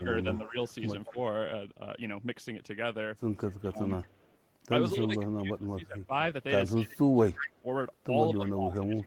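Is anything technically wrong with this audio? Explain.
Yes. The speech has two linked problems from a hands-free call.

From 0.0 to 1.17 s, at 3.61 to 3.84 s, and from 4.95 s to the end, the voice dips, thins and drops out in pieces, by about 15 dB at first and later by about 25 dB. This is likely speech suppressed in double talk: with both sides talking at once, the echo canceller couldn't separate this talker from loudspeaker echo and turned everything down.

From 0.34 to 1.12 s, 3.39 to 4.95 s, and briefly at 8.46 s, a faint copy of the voice trails 224 ms behind. It is about 15 dB below the speech at first, later nearer 30 dB below. That is likely echo leak, where residue the canceller missed at the loudspeaker returns down the line.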